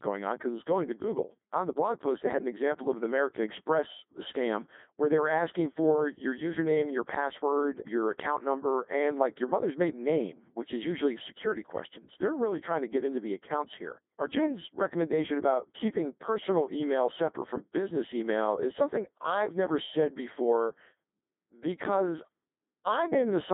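From start to finish the speech carries the sound of the Codec 2 vocoder, heavily damaged, with the band held to roughly 200 Hz to 3.6 kHz and nothing above 3.8 kHz. The original waveform is gone. Only pitch, voicing, energy and a coarse spectral envelope survive, and the decoder rebuilds the voice from sine waves. The result is robotic and buzzy, which fits a 2.4 kbit/s mode. A plain narrowband phone line would sound muffled but natural. Here the voice itself sounds synthetic.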